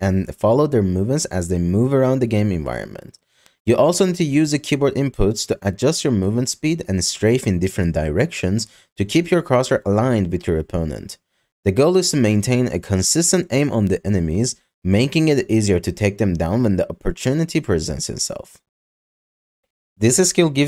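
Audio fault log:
3.46 s, 12.51 s, 13.87 s: bit error spike. Each is a single sharp tick, about -24, -30 and -18 dBFS, where a flipped bit briefly throws a few samples' values by a power of two. On the waveform each shows as a needle unrelated to the signal, and on the spectrogram as a thin vertical line spanning all frequencies.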